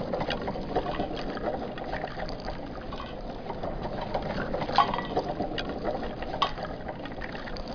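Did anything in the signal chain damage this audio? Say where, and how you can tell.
No, nothing in the chain audibly damaged this audio.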